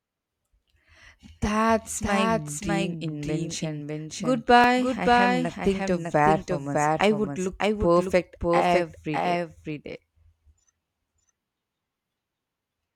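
The speech is likely being mixed in twice, with a second, slower capture path layered under the first. The result is a doubled audio track throughout: a full-band copy trails roughly 0.7 seconds behind, a few decibels quieter, with no decay or room colour.

At 4.64 s the program likely failed to read its samples before the hardware overwrote them, a dropped buffer (overrun). A few tens of milliseconds of sound are lost, heard as a jump where the speech skips abruptly ahead with no gap of silence.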